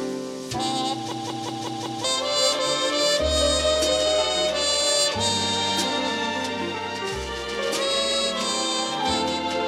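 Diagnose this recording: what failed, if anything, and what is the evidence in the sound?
A system hang loop at the driver or buffer stage runs from 1.12 s to 2.04 s. A 186 ms slice of sound repeats exactly five times, producing a machine-gun stutter at about 5.4 Hz. The period fits an 8192-sample ring buffer that the hardware kept replaying while the host stalled, and roughly a second of real audio never arrived. On the waveform, identical blocks tile end to end. A spectrogram shows the same pattern stamped repeatedly.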